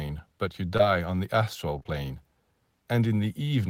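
Short concealed packet loss smears the speech at 0.77 to 0.81 s, then three back-to-back times from 1.79 to 1.90 s, where about 20 ms of audio went missing each time and the receiver extended the preceding sound. Unlike a plain dropout, no silent gap results, only a brief wobble or blur.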